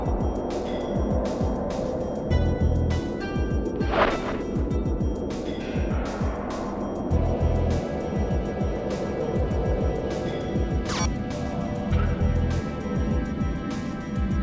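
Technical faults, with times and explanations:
No technical faults are present in this clip.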